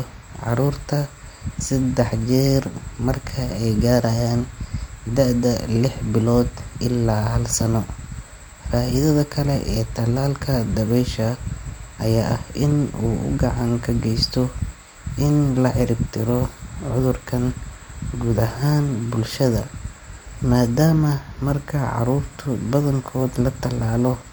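Nothing in the recording points to a technical fault: the speech signal stays steady and continuous throughout, with no breaks, distortion or other disturbance to be heard at any point.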